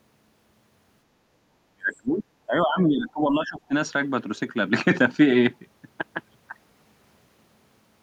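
From 1.64 to 3.73 s the speech sinks by as much as about 30 dB, which points to speech suppressed in double talk, likely an echo canceller muting the near talker while the far side spoke. Unlike a network dropout, the level dips here because the echo canceller turned the voice down.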